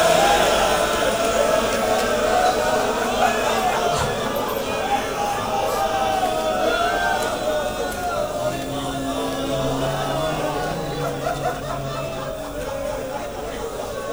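At 12.09 s, an underrun with held sample freezes the waveform at its last value for 1.33 ms, consistent with a 64-sample gap at 48 kHz. Unlike a dropout to silence, there is no sharp click. Playback resumes where it stopped.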